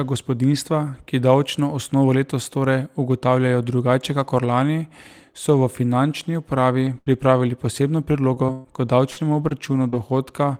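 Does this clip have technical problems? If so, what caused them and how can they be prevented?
Yes. Lost packet rebuilt from error correction at 6.86–6.88 s, 7.06–7.08 s and 7.12–7.14 s: each time a 20 ms packet went missing, and the decoder played the low-bitrate copy carried in the following packet. There is no gap, but those moments sound briefly rougher and noisier. Keeping in-band FEC enabled with enough redundancy, and reducing network loss, keeps these patches rare.

Burst of packet loss at 6.98–7.08 s: several consecutive packets failed to arrive in time. The receiver stretched the last sound for about 80 ms, fading it into a held buzz or hiss, then resumed further on with about 80 ms of speech gone. A larger jitter buffer and a more stable connection would prevent this.

Repeated packet loss (robotic sound) from 8.12 to 9.94 s: seven separate gaps, the longest 122 ms, left about 15% of this stretch concealed. 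Some holes were partly rebuilt from error-correction copies. The rest were patched by continuing the last sound, which makes the audio choppy, with about 280 ms missing. Fixing the congested or unstable link, for example by prioritising the traffic or moving to a wired connection, would prevent this.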